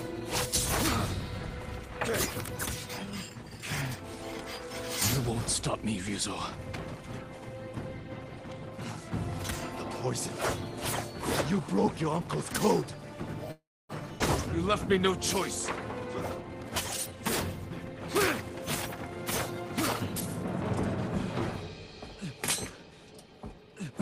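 At 13.51 s the sound stops advancing and its last moment is stretched into a buzzy continuation that fades out, leaving about 0.27 s of near-silence before the audio resumes at 13.92 s from exactly where it left off. This is a call audio freeze, likely caused by packets arriving late and the jitter buffer running dry, so roughly 0.38 s of delay is inserted with nothing lost. On a spectrogram the harmonics smear into flat horizontal streaks that dim to blank, and the waveform tapers into a flat line.

Shortly after, at 14.19 s, there is a skip ahead. Around a tenth of a second of audio is thrown away, and the material on either side is butted together with only a 9 ms fill, so the sound jumps forward abruptly. That recovers roughly 0.1 s of the delay the freeze added. The waveform shows an envelope discontinuity, and the spectrogram shows a sudden vertical seam where formant or partial tracks change position without transition.

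From 16.43 to 17.17 s a jitter buffer speed-up trims the backlog. Short pitch-period slices, around 150 ms in total, are cut out, so the sound plays about 19% fast at unchanged pitch and feels rushed. A second, milder speed-up runs from 17.66 to 18.01 s at about 12% faster, removing roughly 50 ms. On a spectrogram, harmonic spacing stays constant while events are compressed horizontally. The waveform shows periodic cycles spliced closer together.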